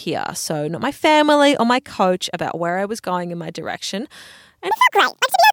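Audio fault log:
4.71–5.52 s, section at the wrong speed: the final stretch of speech abruptly turns hurried and chipmunk-high, running about 1.84 times too fast and raised by roughly ten semitones. Pitch and tempo jump together, which likely comes from that segment being played back against the wrong clock.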